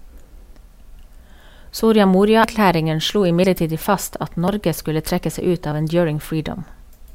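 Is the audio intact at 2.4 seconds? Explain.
No, at 2.44 s the speech jumps ahead, with roughly a tenth of a second missing and no gap of silence. That's likely a dropped buffer (overrun): samples weren't read before the hardware overwrote them, so the two sides got spliced together.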